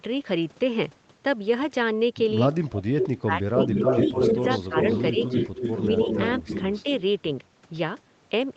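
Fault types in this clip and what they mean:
Echo leak: faint delayed copy at 2.53–2.69 s (139 ms late, about 25 dB down), then a near-full-level repeat 269 ms late from 3.57–6.83 s, likely loudspeaker echo left uncancelled.
Speech suppressed in double talk: the talker dips by up to about 20 dB across roughly 1 s within 2.67–4.75 s, with brief dips at 5.13–5.18, 5.87–5.94 and 6.83–6.88 s, likely the canceller ducking overlapping talk.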